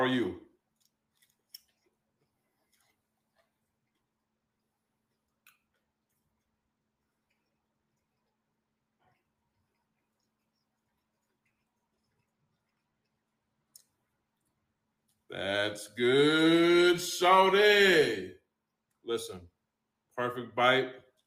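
No technical faults can be heard anywhere in this audio. Nothing in the recording, from the first moment to the last, calls for a timestamp or a note.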